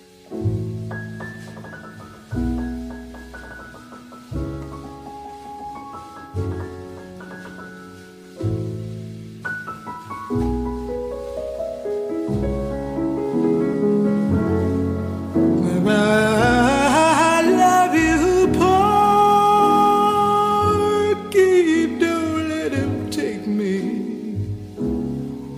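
The decoder lost whole compressed frames at 9.41 s and 13.73 s, either because they were missing from the stream or because it rejected them as damaged. These are compressed frames skipped. Each time, the audio lurches forward by roughly 50 ms, which fits two frames of 23.2 ms each. At each join a small slice of sound is simply absent.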